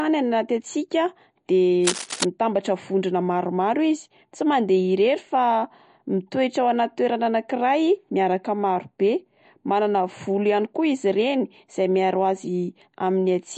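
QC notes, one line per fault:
throughout, MP3 compression: the speech has a plainly audible watery, swirling quality, with nothing above 10.6 kHz, so the top end sounds dull. This is likely lossy encoding at a low bitrate, around 40 kbps, where weak frequency detail is dropped frame by frame and the treble is cut off.
1.80 to 2.25 s, cable scratch noise: right after "hatsiaka de" and ending before "mitambatra vondrona", a burst of dense, uneven scratching and rustling sits over the speech, only a little quieter than it. The likely cause is a worn cable or connector being moved, making its contact resistance jump rapidly.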